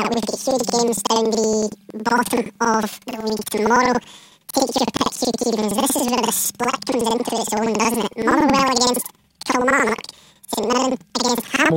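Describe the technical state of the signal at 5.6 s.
At 5.6 s the speech is affected by planar audio read as interleaved, a fault that runs through the whole clip. Each block of about 92.9 ms, which fits a 4096-sample block, stores left and right samples separately, but is read as alternating pairs. Each channel's half therefore plays at double speed in turn, one after the other. The result is speech an octave high, with a flutter at about 10.8 Hz from the block switching.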